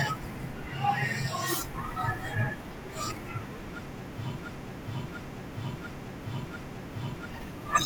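A speech recording with a broken-record loop from 4.39 s to 7.30 s. A fragment of about 0.69 s repeats four times back to back, identically each pass, so the same short stretch of sound plays over and over instead of the speech continuing. Whatever should have been heard during those three seconds is missing. The likely cause is a stall in the player, encoder or stream, which kept resending the last buffered fragment until data resumed.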